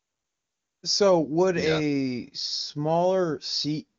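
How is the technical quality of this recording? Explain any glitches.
No glitches or technical faults are audible here.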